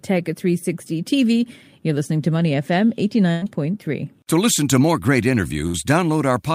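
At 3.31 to 3.45 s and again at 5.67 to 5.77 s, a burst of packet loss makes the receiver stretch the last sound into a fading continuation, about 100 ms then 68 ms, before the speech resumes with 80 ms and 40 ms skipped. Spectrograms show the last sound's spectrum held and decaying; waveforms show a shrinking continuation, then an abrupt jump.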